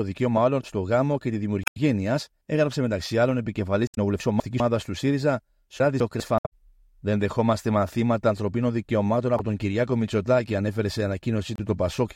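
Damaged data in a compressed stream first appears at 1.63 to 1.77 s, with a second occurrence at 3.87 to 3.98 s. In each, a stretch of the encoded stream is corrupt, so the decoder misreads or rejects those frames and loses sync until it finds the next valid frame header. The result is a brief chirp or squawky blip that breaks through the speech.

Chunks out of order follows at 4.2 to 4.6 s. A 200 ms block of audio plays one chunk late, after the block that should follow it. No audio is lost, but the swapped order creates three hard joins, and the speech sounds jumbled for that moment. The same reordering recurs at 5.8 to 6.2 s.

Damaged data in a compressed stream returns at 6.37 to 6.48 s, then again at 9.36 to 9.41 s and 11.56 to 11.60 s. These later events are shorter glitchy blips, with the last two only about 50 ms and 40 ms long.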